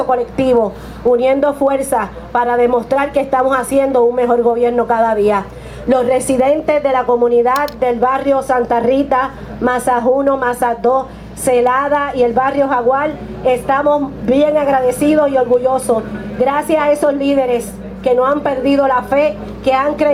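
Gain pumping runs through the whole clip: the gain swings by around 10 dB, pulling loud and soft parts closer in level, so the audio sounds squashed. The likely cause is gain set far too high with a fast limiter clamping down on peaks. On the waveform, peaks sit flattened at a near-constant ceiling while the quiet stretches rise.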